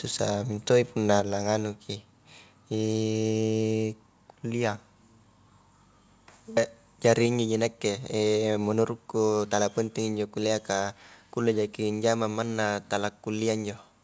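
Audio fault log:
1.2 s and 7.26 s: microphone volume stepped down. At 1.2 s, between "mintoi punna" and "la nganuki", the level falls suddenly by about 3 dB. At 7.26 s it falls again, by about 2 dB. Each drop is a single step with no gradual fade. The background drops with the voice. This likely comes from the call software lowering the microphone's input gain after judging it too hot. Nothing above 8 kHz passes through the G.722 call path.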